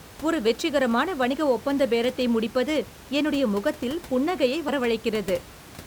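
A brief skip interrupts the speech at 1.32 s and again from 4.68 to 4.70 s. Both are compressed frames skipped: whole 10 ms frames are lost, so the audio jumps ahead by about 20 ms, then about 30 ms.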